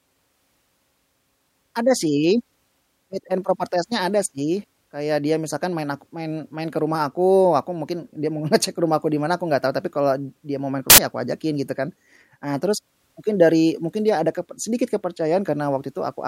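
Samples built from the wrong bytes strike at 10.9 to 10.98 s, right after "dia mau maen ke" and before "ya aku ajakin gitu". For those 80 ms each sample's bytes are misassembled, so the rapidly changing low bits dominate, producing a loud burst of harsh broadband noise.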